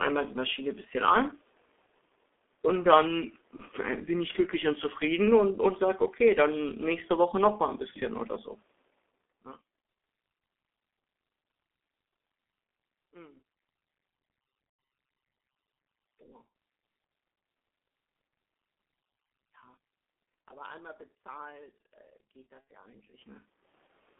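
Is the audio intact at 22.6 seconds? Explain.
No. Just after "einmal bezahlt äh geht", from 22.61 to 22.67 s, the speech smears into a buzzy tone or a coloured noise that fades, for about 60 ms. This is VoIP packet loss concealed by the speech codec: the decoder repeated its last pitch and filter at falling gain, which fits two lost 30 ms frames.

At this moment the sound is also muffled and hoarse, with blurred consonants, confined to roughly 250 Hz to 3.5 kHz. That is the G.723.1 codec. Its slow voice model and very low bitrate, which sounds like about 6 kbit/s, do heavy damage here.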